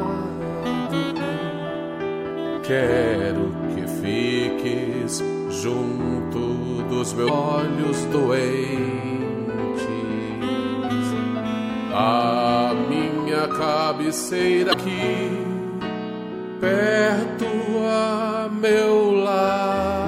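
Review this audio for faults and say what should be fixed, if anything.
Damaged data in a compressed stream causes two short glitches, at 7.25 to 7.30 s and 14.70 to 14.74 s, each about 45 ms. Corrupted frames make the decoder misread data and resync on the next frame header. The waveform shows an abrupt discontinuity, and the spectrogram shows a brief broadband smear. Re-fetch or re-encode from an intact source, and carry the stream over a checksummed, error-checked transport.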